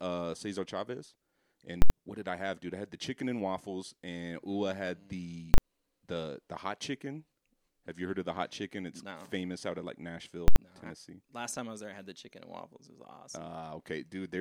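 Invalid numbers at full scale: a calculation overflowed into invalid values pinned at maximum level, producing loud bangs at 1.82, 5.54 and 10.48 s, each 40–80 ms long.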